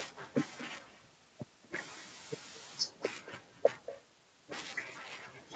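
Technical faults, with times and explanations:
Throughout, echo with no canceller: every phrase returns roughly a fifth of a second later, about 14 dB quieter and thinner. The far end's loudspeaker is leaking into its microphone, and nothing strips that copy out before it travels back. The top end stops near 8 kHz, as the call codec's bandwidth allows.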